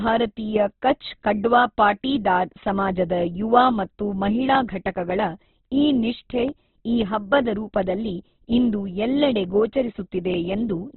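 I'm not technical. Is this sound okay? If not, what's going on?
No. The speech sounds muffled and grainy throughout, as if heard over an old phone line, with nothing above about 4.2 kHz. This is likely Opus compression squeezed very hard, which trims the top end and turns clear sounds rough.

There's also a click roughly every 1.9 seconds, from 0.70 s to 10.34 s, about seven in all. These are clock drift buffer slips: likely two devices keeping slightly different time, so every so often a tiny chunk of audio gets dropped or repeated.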